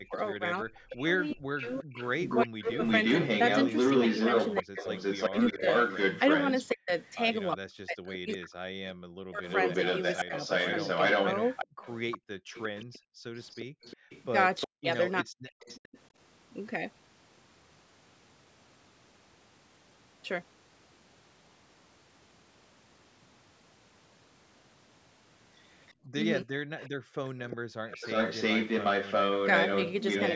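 From 0.13 to 15.85 s and again from 25.88 to 30.25 s, a delayed copy of the speech trails it by 358 ms at roughly the same loudness, most likely an echo leak. The far end's echo canceller failed to remove its loudspeaker pickup. Unlike reverberation, this is a distinct, separated repeat.

From 0.0 to 2.78 s, 4.62 to 10.33 s and 14.65 to 15.97 s, the speech dips by as much as about 40 dB in broken pieces, totalling about 1.5, 2 and 0.7 seconds. This is likely speech suppressed in double talk: with both sides active, the canceller turned the talker down along with the echo. What sets it apart is that the speech itself is cut.

From 11.67 to 14.1 s and 25.94 to 27.74 s, the room sound drops by about 38 and 39 dB for brief moments. This is background gated by the echo canceller. Here only the background vanishes. It returns once the canceller releases. The band stops at 8 kHz throughout.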